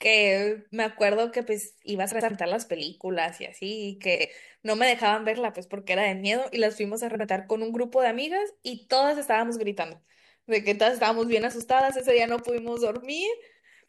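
At 2.11 to 2.31 s, then 4.15 to 4.26 s and 7.15 to 7.25 s, the speech has frames out of order: two adjacent blocks were swapped before decoding, 96 ms each in the first case and 48 ms each in the later two. Each stretch comes out as a brief garbled flutter, and nothing is lost in time. On a spectrogram, harmonic tracks break and jump at three vertical seams; the waveform shows matching discontinuities.

From 11.23 to 12.97 s a train of clicks runs over the speech, around twenty sharp pulses evenly spaced at 10.4 per second, each about as loud as the speech itself and audible as steady ticking even between syllables. The likely cause is electrical interference or a faulty connection or power supply injecting near-identical pulses. A spectrogram shows a regular comb of thin full-band vertical lines, and the waveform shows evenly spaced spikes of nearly identical shape.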